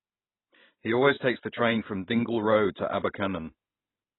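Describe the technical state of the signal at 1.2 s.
At 1.2 s the speech carries the same AAC compression damage heard through the whole clip: nothing above about 3.9 kHz, with a dull, smeared, warbly texture. That's likely a very low-bitrate AAC-LC encode, fitting roughly 16 kbps, coarsely quantising the spectrum.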